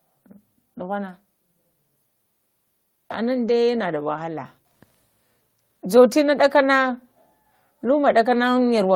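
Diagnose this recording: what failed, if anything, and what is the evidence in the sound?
Nothing in this speech recording points to a failure at any stage of the chain. No dropouts, glitches or other disturbances can be heard anywhere in the audio.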